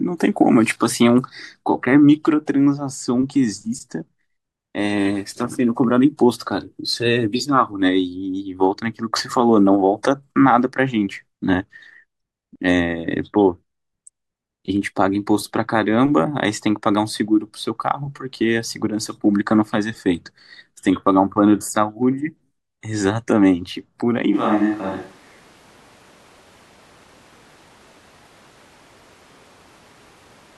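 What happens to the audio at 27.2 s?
From 24.36 s to the end, the speech sounds roomy and hollow, with thinner bass and background noise roughly 30 dB below the voice, at much the same level as before. This is a switch to a distant microphone, likely a farther one replacing the close microphone.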